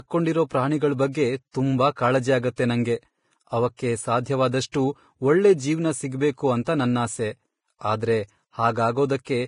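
Throughout, the speech sounds hissy and grainy. Nothing is present above 10.5 kHz, and the remaining treble is rough. This is likely heavy Vorbis compression. The codec quantises the high band so coarsely that detail turns to noise, which fits a low bitrate near 29 kbps.

Pre-echo appears at 2.56 s, 3.77 s and 4.72 s. Each is a short hiss lasting about 21 to 23 ms before a sharp onset. The codec spreads noise across its whole block, so the quiet moment before each attack gets filled and the attack smears.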